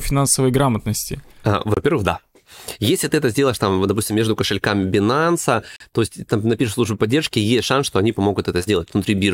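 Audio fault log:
1.74–1.77 s and 5.76–5.80 s, gap between stream segments: the speech cuts out abruptly for about 25 ms and then about 41 ms, with hard edges on both sides. The streaming segments, each 2 s long, have timestamps that don't quite meet, so the player fills each hole with silence. Nothing of the speech is lost. Instead, those milliseconds are added to the timeline, so each dropout is brief, clean-edged and followed by speech resuming where it left off.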